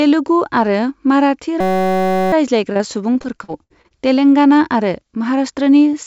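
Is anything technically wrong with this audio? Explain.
Yes, two faults stand out.

The system hang loop runs from 1.61 to 2.33 s. The driver stalled while the hardware kept replaying one 5.33 ms chunk, which fits a 256-sample buffer. It produces a steady 188 Hz buzz.

Repeated packet loss (robotic sound) runs from 2.72 to 3.92 s. Ten gaps, the longest 66 ms, were patched by extending the previous sound, so about a fifth of the stretch sounds choppy.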